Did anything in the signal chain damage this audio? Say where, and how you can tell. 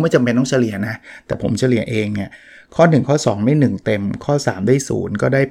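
No, none of the stages in this speech recording's signal chain shows any audible damage. Listening closely throughout, there is nothing that points to a problem anywhere from capture to playback.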